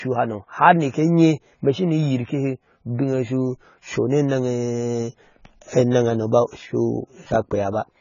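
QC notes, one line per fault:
Throughout, AAC compression: the speech has nothing above 7 kHz and sounds dull and smeared, with a warbling, fizzy swirl on sibilants and held vowels. That points to heavy damage from an AAC-LC encoder, likely at a very low bitrate around 16 kbps, which drops the top band and quantises the rest so coarsely that bands vanish or fill with substitute noise. A simple low-pass filter would dull the top without this watery, time-smeared texture.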